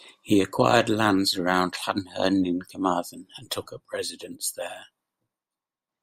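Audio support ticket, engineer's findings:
Sudden gain jump, 3.67 s to 5.89 s: speech and noise floor drop together by about 4 dB, then step back up. Waveform shows a hard envelope step at each edge; spectrogram darkens evenly across all bands. Likely an unramped digital gain change.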